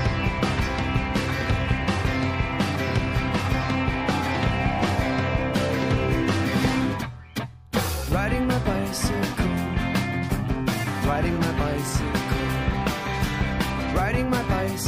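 No technical faults are audible anywhere in the clip.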